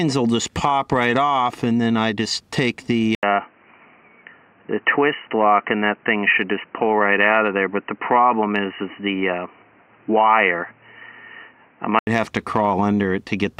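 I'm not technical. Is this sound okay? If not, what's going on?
No. At about 3.15 seconds the recording most likely switched to a poorer microphone, an input switched to a poorer device, until about 12.07 seconds. After a brief gap, the sound turns dull and boxy with faint new background noise, then clears again.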